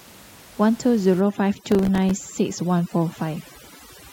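Overdone noise removal sets in at 1.2 s and continues to the end of the clip. A noise reduction stage is working far too hard on the room noise, which sits about 23 dB below the speech. It pushes individual frequency bands down or out whenever they resemble its noise estimate, taking the quieter parts of the voice with them. The background collapses into near silence flecked with twinkling specks.

Processor overload crackle runs from 1.55 s to 2.11 s, layered on top of that. The processor repeatedly failed to finish its small audio buffers on time, around fifteen missed deadlines, each gap lasting only a few milliseconds, which fits a buffer of roughly 3 ms. Every miss drops in a hard-edged slice of silence, and the run of them sounds like a gritty burst of crackle riding on the speech until the load eases.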